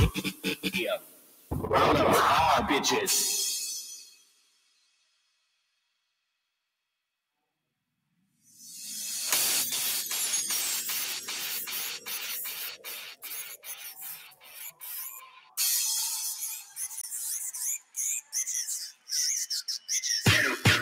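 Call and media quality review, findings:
Level pumping and thinning across the whole clip, swings of roughly 20 dB. Noise suppressor applied to music or sounds: a speech-tuned suppressor treats sustained content as noise and pulls it down.

Sustained passages and tails sink and cut short at 0.15–0.7, 0.97–1.51, 3.83–6.49, 13.09–15.58, 16.6–16.8, 17.78–17.97 and 18.89–19.1 s, drops of about 10 to 19 dB. Sound cut by the noise suppressor.

20 ms silence at 17.01–17.04 s, sound resuming as if it had played on. Likely a Bluetooth dropout, consistent with a single late packet discarded.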